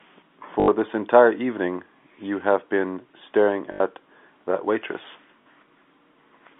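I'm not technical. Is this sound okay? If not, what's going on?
No. The speech has packet loss with the last packet repeated at 0.60 to 0.68 s, 3.72 to 3.80 s and 5.42 to 5.46 s. A plain dropout would go silent. Here the same tiny scrap of sound repeats, giving a brief buzzy, robotic stutter.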